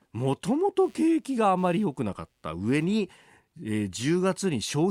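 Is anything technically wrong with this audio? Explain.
Yes. From 0.84 to 2.84 s a faint buzzing chirp sits under the speech, pulsing at somewhere around 150 times a second and roughly 40 dB below the voice, then stopping as abruptly as it began. This is computer activity noise: changing load on the processor, graphics card or mouse shifts the ground that the audio circuit shares, so the interference follows the computer's workload, not anything in the speech itself.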